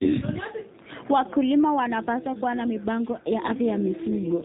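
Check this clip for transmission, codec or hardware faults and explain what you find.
One codec fault runs through the whole speech clip. Throughout, AMR narrowband mobile codec damage is plainly audible. Nothing passes above about 4 kHz, which points to 8 kHz sampling. A low-order vocal-tract model excited by sparse pulses, at a rate consistent with roughly 7.4 kbps, makes the voice sound buzzy and synthetic.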